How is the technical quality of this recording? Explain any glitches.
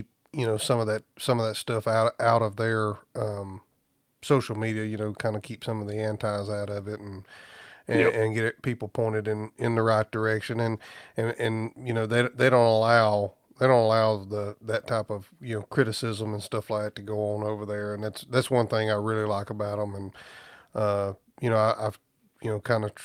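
No glitches or technical faults can be heard here.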